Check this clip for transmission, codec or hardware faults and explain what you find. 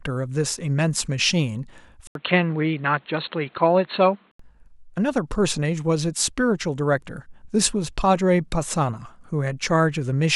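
One fault stands out: from 2.07 s to 4.39 s the speech goes dull and boxy, with nothing above 4.3 kHz, then clears again. An input switched to a poorer device is the likely cause. The bandwidth narrows, a different background hiss appears roughly 35 dB below the speech, and an 80 ms silence marks the switch. Loudness barely changes. That gap and the new noise floor distinguish it from a codec simply dropping bandwidth.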